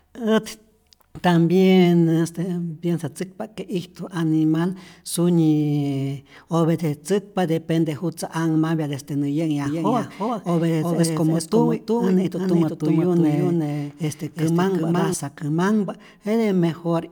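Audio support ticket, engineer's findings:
Second capture path or out-of-step edit, likely, doubling the audio track from 9.66 to 15.14 s after "desde nä": a dry copy about 0.4 s behind, a few dB quieter, starting and stopping abruptly.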